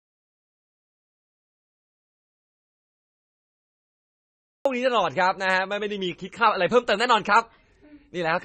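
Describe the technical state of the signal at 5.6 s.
At 5.6 s the speech carries the same damage heard through the whole recording, most likely from heavy MP3 compression at a starved bitrate, which fits roughly 25 kbps. Nothing reaches above 9 kHz, and the weak frequency detail flickers in and out between frames, giving a watery, swirling texture and metallic chirps on s sounds. A plain low-pass filter would dull the top end the same way but leave no warbling behind.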